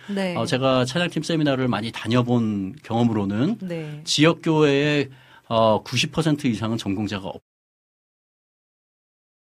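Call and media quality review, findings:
Nothing stood out on listening to this speech clip.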